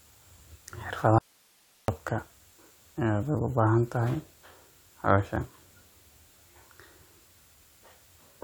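From 1.18 to 1.88 s, an audio dropout to a faint residue: speech abruptly becomes faint hiss, likely a lost feed, leaving a thin, flat waveform band.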